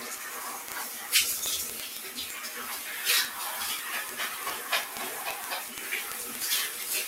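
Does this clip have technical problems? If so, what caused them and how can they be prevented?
Yes. A noise suppressor applied to music or sounds runs through the whole clip. Because it treats sustained tones, ambience and decay tails as noise, it pulls them down by roughly 5 dB while onsets pass, so the sound pumps and thins between attacks. Prevent it by bypassing speech-oriented noise suppression whenever the source is music or general sound.

Word clock ticks run from 0.11 s to 7.06 s, a couple of hundred sharp, uneven clicks at a steady rate of roughly one every 30 ms. The receiving device is free-running on its own clock, and each time it slips against the sender's by one sample, that sample is dropped or repeated. The rate points to clocks several hundred parts per million apart. Prevent it by locking the receiver to the incoming digital signal or to a shared word clock.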